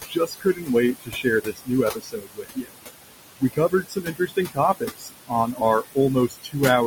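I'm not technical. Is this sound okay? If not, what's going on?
No. There are two related problems, both caused by noise suppression, the processing that tries to remove background sound.

The first is noise suppressor artifacts, present for the whole clip. The suppressor strongly turns down whatever it judges to be steady background noise, over and over, many times a second. The room noise, which sits well below the speech, keeps being pushed down and let back up. What survives can warble or flutter, and the speech can sound thin or watery.

The second is speech cut by the noise suppressor. At several points the suppressor mistook parts of the speech for noise and turned them down along with the background. This happens from 0.01 to 0.7 s, 0.94 to 1.71 s, 1.91 to 2.77 s, 3.4 to 4.58 s, 4.8 to 5.33 s, 5.53 to 5.62 s and 6.28 to 6.56 s. Within each stretch, soft sounds and word endings come out swallowed or faint.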